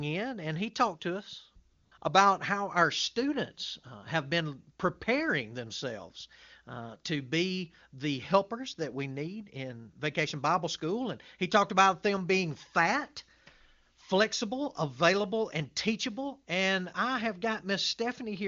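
AMR comfort noise fills the gap after "he talked to us" from 1.73 to 1.91 s and 1.97 to 2.01 s. Speech frames stopped, so smooth synthetic noise briefly replaces the real background.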